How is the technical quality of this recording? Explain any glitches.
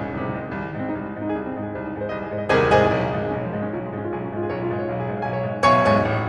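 No glitches or faults are audible in this music.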